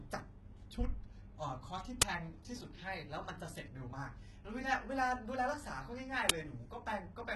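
The whole clip has that heavy HE-AAC compression sound, likely from a very low-bitrate stream, something like 16 kbps. The treble is rebuilt from copies of lower bands rather than coded, so s sounds come out gritty and lispy, and nothing survives above 18 kHz.

At 2.02 s and again at 6.29 s there's an uninitialised buffer fault: a loud crack of digital noise about 11 ms long, which fits a 512-sample buffer being played out before any real audio landed in it, so leftover memory got read as samples.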